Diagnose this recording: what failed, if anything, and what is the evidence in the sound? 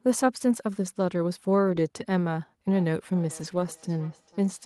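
Network stage first: there are two spots where a lost packet was rebuilt from error correction, at 1.67 to 1.81 s and 3.39 to 3.65 s. There's no gap, but about 80 ms and then 140 ms of speech turns rougher and noisier. That's the decoder playing the low-bitrate backup copies carried in the following packets.

Then a feedback echo between two devices starts at 2.73 s and runs to the end. The speech comes back roughly every 0.4 s, thinner and more ringing each pass, peaking at about 25 dB below the direct speech. A second device in the room is replaying the call into the other's mic, and neither echo canceller can remove audio that its own device didn't play.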